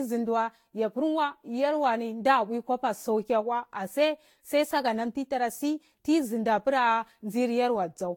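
Generation loss runs throughout the speech, from start to finish: the audio sounds swirly, smeared and hollow, consonant attacks are blurred, and nothing survives above 17.5 kHz. The likely cause is repeated lossy coding, with the audio decoded and re-encoded around seven times at a rate consistent with Vorbis near 68 kbit/s. Each pass requantises on a shifted frame grid, so noise piles up beyond what that bitrate alone would produce.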